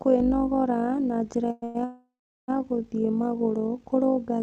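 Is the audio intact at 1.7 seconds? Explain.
No. At 1.7 s you're inside a call audio freeze running from about 1.64 to 1.77 s, right after an earlier one from 1.51 to 1.64 s, both just after "na njĩra". Packets were likely held up and the jitter buffer ran dry, so the receiver keeps stretching the last sound into a fading buzz or hiss with no dead silence. Nothing is lost, but roughly a tenth of a second of filler gets slipped in each time. On top of that, overlap-add ripple runs through the whole clip: frames were rejoined with an overlap that doesn't sum evenly, so the level pumps by about 6 dB around 50 times a second.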